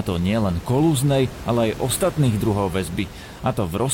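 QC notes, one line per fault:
Nothing in this speech recording stood out as a problem on listening.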